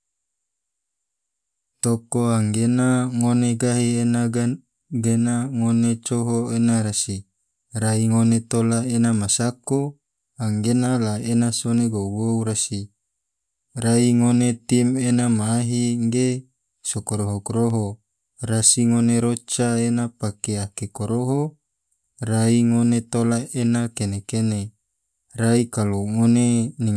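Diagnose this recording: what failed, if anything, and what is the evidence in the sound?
Nothing in this recording points to a failure at any stage of the chain. No event in the sound calls for a diagnosis.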